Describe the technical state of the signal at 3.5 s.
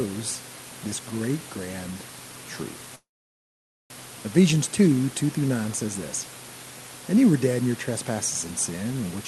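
At 3.5 s the signal is in a dead stretch. From 2.95 s the last sound smears into a short fading buzz, then drops to silence for about 0.85 s before resuming at 3.92 s. This is a call audio freeze, likely caused by packets stalling in transit until the jitter buffer ran empty. When they arrived, playback picked up where it stopped. Nothing was lost, but the rest of the audio now runs about 0.95 s late.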